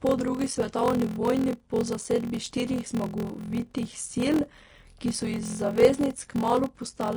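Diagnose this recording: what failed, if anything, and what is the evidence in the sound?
Codec stage: the speech is cut off in the treble and the treble is hissy and grainy. This is likely Vorbis compression at a low bitrate, around 34 kbps.

Driver or buffer stage: a block size mismatch (padded) produces a steady 43.1 Hz buzz throughout. Playback runs at 0.861 times normal speed. This fits short writes being zero-padded into 1024-sample reads.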